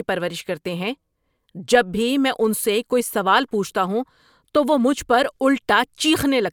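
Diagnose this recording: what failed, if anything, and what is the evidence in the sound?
Nothing in the chain seems to have failed here; the speech recording carries on without a break or glitch anywhere along the way.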